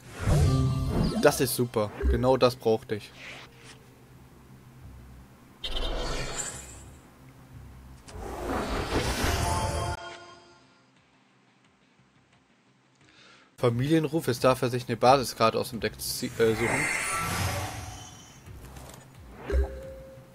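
At 9.95 s a 20 ms gap, after which the sound goes boxy, quieter by around 10 dB, with nothing above 8.6 kHz and a faint new noise floor, until 13.58 s. This is likely an input switched to a poorer device, with a narrower band and its own tone.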